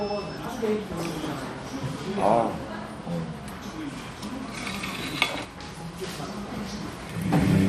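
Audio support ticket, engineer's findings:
MP2 compression, throughout: dull, gurgling granular texture; spectrogram shows flickering upper bands, nothing above 14.4 kHz. Likely low-rate MPEG Layer II, around 64 kbps, starving sub-bands.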